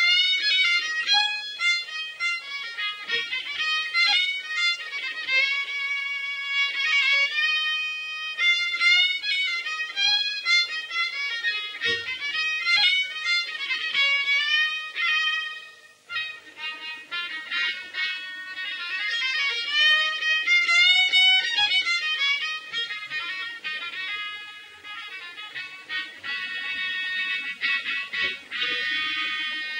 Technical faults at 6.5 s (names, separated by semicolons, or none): none